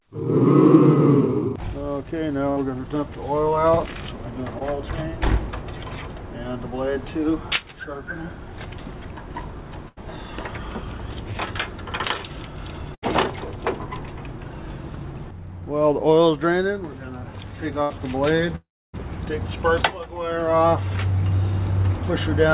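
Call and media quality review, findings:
Burst of packet loss at 2.50–2.59 s, 9.88–9.98 s, 12.94–13.04 s, 17.82–17.92 s: held buzz or fading hiss, then a jump ahead. Jitter buffer/decoder concealment: 60–80 ms lost per event, last sound extended and faded, that stretch skipped.

Short concealed packet loss at 4.59–4.62 s: brief smear or wobble. Decoder concealment: about 20 ms never arrived in time, filled by continuing the preceding sound, then blended back into the real audio.

Long network dropout at 18.56–18.95 s: sound stretches into a fading buzz/hiss, then about 0.29 s of silence, resuming further on. Likely a network outage: roughly 0.38 s lost, concealment decays to nothing. Band limit at 4 kHz fits a narrowband G.711 call path.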